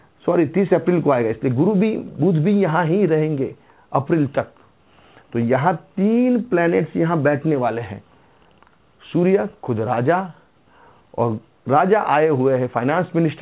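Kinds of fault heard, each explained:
No faults can be heard.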